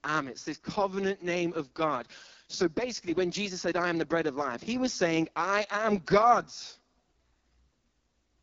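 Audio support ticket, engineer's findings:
AMR wideband (HD Voice) codec at its lowest rate, fitting 6.6 kbit/s, throughout. Speech is rough and raspy, with heavy coding damage and nothing above 7.2 kHz.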